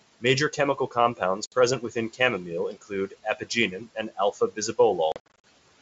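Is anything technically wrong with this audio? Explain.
Yes. There are two kinds of fault.

Packet loss on an ADPCM call occurs at 1.46 to 1.55 s, where 60 ms drops out, about three packets. It recurs at 5.12 to 5.45 s, where 200 ms is lost in scattered gaps across 320 ms, roughly ten packets, the longest gap 60 ms. Silence fills each hole. The decoder's predictor and step size then lose track of the sender's. So the sound returns with brief distortion.

Speech cut by the noise suppressor occurs at 2.73 to 2.92 s, 3.10 to 3.47 s and 3.72 to 4.57 s. The suppressor mistakes quiet speech for background noise. It turns it down by up to about 13 dB, 13 dB and 10 dB. Soft consonants and word endings sound swallowed or faint.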